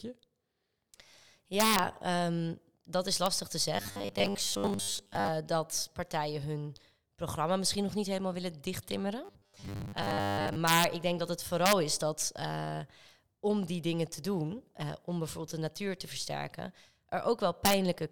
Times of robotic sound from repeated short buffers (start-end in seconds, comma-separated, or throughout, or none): 3.77-5.28, 9.25-10.56